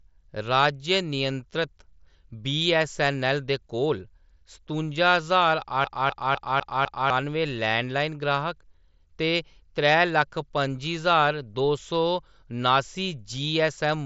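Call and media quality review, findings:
CD stuck on one turn, 5.84–7.10 s, right after "दे कोल सतुंजा ज्हार". Same 0.25 s slice of speech repeats five times, brief mute at each jump. Fast, even stutter. Probable component: disc playback source. Scratch bounces laser back one track per rotation, replaying identical audio. Heard through the mSBC headset link, whose 8 kHz band ceiling and light graininess on loud passages stay constant across the loop.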